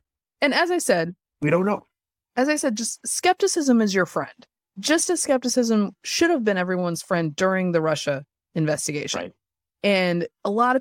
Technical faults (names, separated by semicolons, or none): none